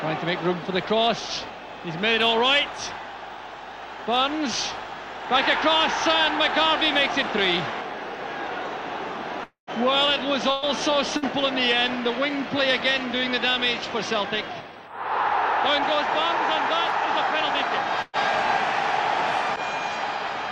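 A long network dropout at 9.43 to 9.70 s leaves the audio carrying on as a fading buzz or hiss, then about 0.12 s of silence, before it resumes roughly 0.24 s further on, likely because packets stopped arriving and the receiver could only stretch the last sound. Bursts of packet loss at 10.51 to 10.65 s, 11.17 to 11.25 s and 18.02 to 18.16 s each drop a short run of about 120, 60 and 120 ms. The gap is bridged by a held, decaying copy of the preceding sound, with no silence in the first and third, and the audio picks up past the missing piece.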